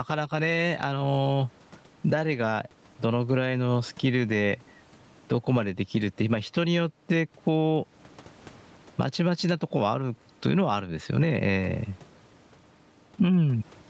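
Throughout the speech, the gain is pulled down under every loud syllable, a swing of roughly 15 dB, so the level sounds squashed. This gain pumping likely comes from input gain set far too high, with a fast limiter clamping each peak.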